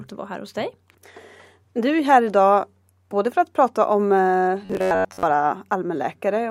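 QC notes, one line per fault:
4.65–5.23 s, robotic sound from repeated short buffers, after "att prata om eh". Speech turns to a metallic 94 Hz buzz, likely from an 11 ms block being looped.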